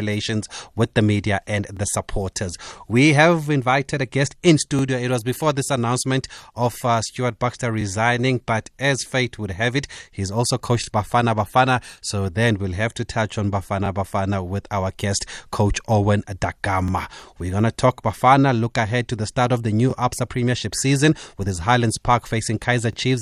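Overlapping chunks cause a brief stutter at 1.77–1.79, 4.79–4.81, 7.81–7.84, 10.84–10.86, 13.86–13.88, 16.88–16.91, 19.91–19.93 and 22.93–22.95 s. Each 3 s chunk begins before the previous one ends, replaying about 23 ms. Unlike dropouts, sound is doubled, not missing.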